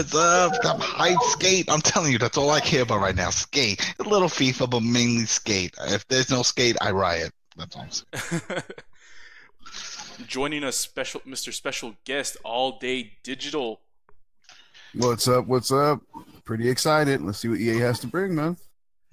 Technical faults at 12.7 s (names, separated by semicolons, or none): none